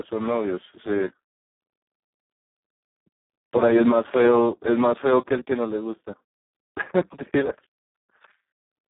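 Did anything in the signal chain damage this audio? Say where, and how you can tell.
Yes. Throughout, the speech sounds hoarse, buzzy and near-robotic, confined to roughly 150 Hz to 3.5 kHz with nothing above 3.8 kHz. That is heavy Speex codec damage at the codec stage: CELP starved of excitation bits, which fits a setting around 4 kbps.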